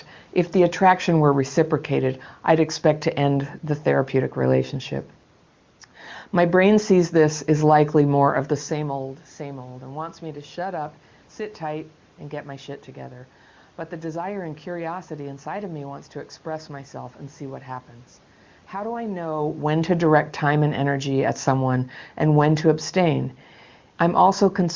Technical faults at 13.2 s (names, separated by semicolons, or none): none